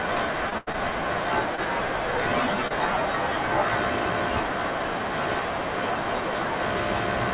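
Short concealed packet loss affects this speech recording at 0.50 to 0.54 s, 0.72 to 0.76 s, 1.56 to 1.60 s and 2.68 to 2.72 s. Each time, about 20 ms of audio failed to reach the decoder in time, and the receiver covered the hole by extending the preceding sound for between 13 and 25 ms before blending back. The result is a brief smear or wobble where a tiny slice of the speech is gone. A burst of packet loss runs from 0.58 to 0.69 s, between the first two short gaps. About 80 ms went missing, and the receiver stretched the last sound over roughly 90 ms while fading it, so a held buzz or decaying hiss replaces that stretch before the speech picks up further along. Throughout, nothing is present above 4 kHz, which points to a narrowband call codec of the G.711 mu-law kind.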